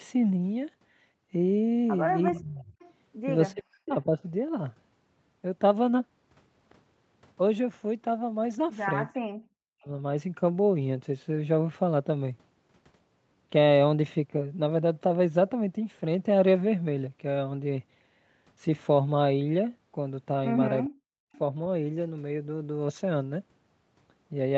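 Speech suppressed in double talk cuts into this speech recording at 2.3–2.65 s, 3.52–4.24 s, 9.08–9.89 s and 20.87–21.25 s, with the level dropping about 20 dB in the first dip and about 40 dB in the others. The likely cause is an echo canceller ducking everything while both ends spoke at once. Echo leak appears at 2.79–2.93 s and 21.33–21.38 s as faint copies about 30 dB down, delayed 378 ms and 411 ms, likely loudspeaker sound the far end's canceller failed to remove. The sound stops at 8 kHz, fitting a wideband call codec.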